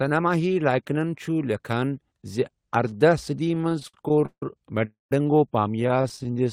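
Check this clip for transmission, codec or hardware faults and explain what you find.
Two kinds of network-timing fault turn up here, both from packets arriving late rather than going missing.

Repeated stalls (stutter) hit twice. From 3.48 to 4.43 s there are 18 little gaps, the longest about 160 ms, where the jitter buffer kept running dry and the receiver stretched the last sound to cover. That's 383 ms of filler, roughly 41% of the stretch, so the speech drags and hiccups. From 5.76 to 6.46 s it's milder: 15 gaps, none over 23 ms, 157 ms filled, about a quarter of the span. The speech still drags and stutters, just less. Nothing is lost either time.

Between them, from 4.85 to 5.12 s, there's a call audio freeze. The speech halts and the last sound carries on briefly before dropping to about 170 ms of silence, 261 ms in all, then resumes exactly where it stopped. The likely cause is packets held up in transit, which emptied the jitter buffer, so the gap is inserted rather than anything being cut out.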